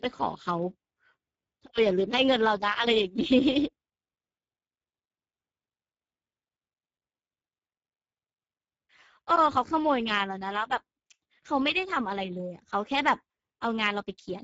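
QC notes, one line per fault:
Throughout, Speex codec: the speech sounds plainly noisy and hoarse. The encoder has too few bits to model the excitation between voice resonances, which fits a low bitrate near 10 kbps. Nothing is present above 7.7 kHz, so the top end sounds closed off.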